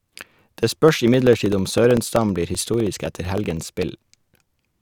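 From about 0.05 s to 4.72 s, the speech is hit by periodic USB or driver dropouts: every 64 ms something stalls the audio path, and roughly 2 ms gets swapped for silence. You hear it as a steady ticking, around 16 per second.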